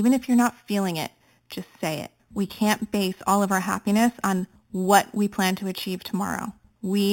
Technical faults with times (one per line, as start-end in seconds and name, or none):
0.00-7.12 imaging from sample-and-hold upsampling